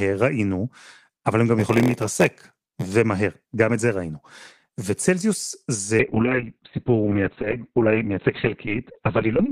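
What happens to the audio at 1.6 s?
From 1.58 to 2.86 s the speech shows a block size mismatch (padded): each block written falls short of the read size, which fits a 512-sample block, and zeros fill the remainder. The resulting gaps give an 86.1 Hz buzz, and the speech runs at 0.938 speed with its timbre unchanged.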